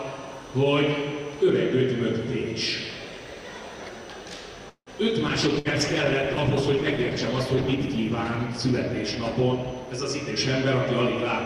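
The audio stalls briefly at 4.69 s and carries on at 4.90 s. For about 0.17 s the last sound is stretched into a fading buzz or hiss that dies to near-silence for about 90 ms before the sound picks up where it left off, with nothing skipped. The likely cause is a call audio freeze, where delayed packets drained the jitter buffer and the receiver padded the wait. On a waveform it appears as a decaying smear followed by a flat line, and on a spectrogram as horizontal streaks that thin out into a blank strip, with everything after it pushed about 0.17 s later. From 5.30 s to the end there is a call bitrate drop: the encoder was cut from 128 kbps to 15 kbps, staying at the bottom for about 1.9 s. At that rate the coding turns coarse, and the sound becomes rough and watery with its top end muffled. A spectrogram shows the upper bands suddenly chopped off at a low ceiling and the remaining energy broken into blotchy patches, while the waveform envelope changes little. 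Inside that stretch, at 5.59–5.68 s, a burst of packet loss drops about 60 ms of audio. The receiver held the last sound as a briefly sustained, quickly fading buzz or hiss, and then the audio jumps ahead. This shows as a short run of frozen, smeared spectral lines that end in an abrupt discontinuity, with a small notch of shrinking amplitude in the waveform.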